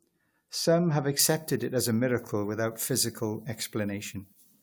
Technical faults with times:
1.19-4.63 pre-emphasis left on

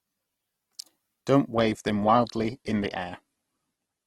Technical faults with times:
1.55-4.06 adaptive stream at a lower bitrate

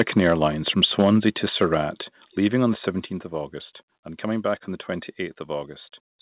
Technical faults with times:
0.00-0.44 microphone overload
0.83-1.29 microphone overload
1.02 microphone volume stepped down
1.61-1.75 microphone overload
2.04 microphone volume stepped down
3.06 microphone volume stepped down

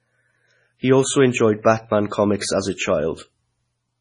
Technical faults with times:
0.00-4.01 MP3 compression

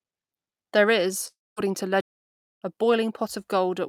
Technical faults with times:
1.27-1.58 long network dropout
2.01-2.62 playback stall

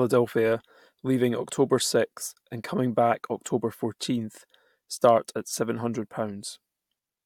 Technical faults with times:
none

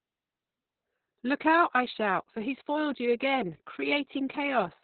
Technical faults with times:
0.00-4.83 Opus voice compression

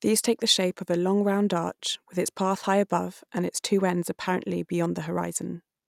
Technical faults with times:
none

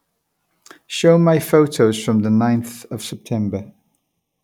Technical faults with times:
3.13-4.44 channel delay (comb filtering)

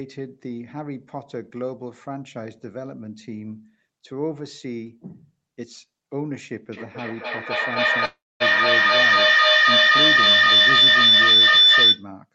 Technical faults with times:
6.72-12.12 feedback howl
8.05-8.42 call audio freeze

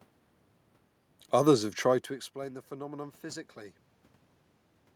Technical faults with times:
none

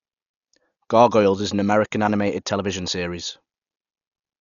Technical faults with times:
0.00-4.40 Dolby Digital compression

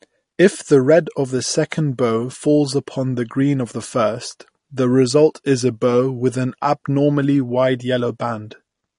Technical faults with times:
0.00-8.98 MP3 compression

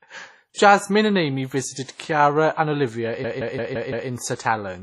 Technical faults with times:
0.00-4.83 WMA compression
3.24-4.10 system hang loop

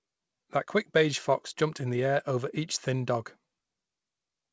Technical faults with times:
none

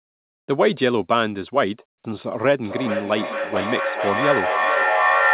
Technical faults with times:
1.88-2.04 comfort noise in place of the background
2.64-5.34 feedback echo between two devices

